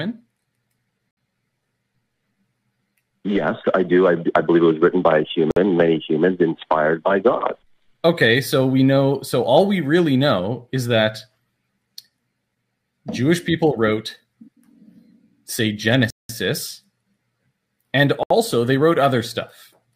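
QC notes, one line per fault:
1.11–1.17 s, 5.51–5.57 s, 16.10–16.30 s, 18.23–18.31 s, Bluetooth stall: sound drops to clean silence for 62, 55, 190 and 73 ms, then resumes, likely the headphone buffer running dry while delayed packets were resent.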